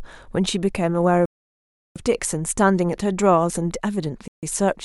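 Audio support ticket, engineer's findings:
Bluetooth stall, 1.26–1.96 s (0.7 s) and 4.28–4.43 s (0.15 s): speech drops to silence, then resumes; likely radio interference delaying packets until the headphone buffer emptied.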